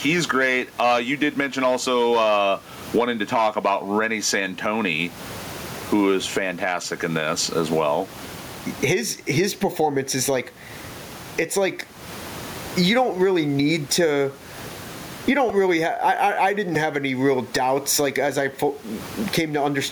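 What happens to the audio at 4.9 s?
At 4.9 s the clip is in the middle of gain pumping that runs through the whole recording. The background sits about 33 dB below the speech, and the gain swings by roughly 20 dB. The likely cause is input gain set far too high with a fast limiter clamping it down on each peak. Unlike a noise gate, which cuts the background to silence, this pulls loud and soft parts closer in level and squashes the sound.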